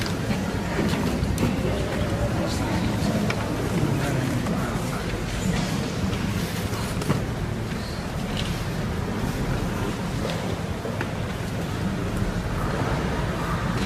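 No technical fault can be heard anywhere in this audio; the signal stays continuous and intact for its whole duration.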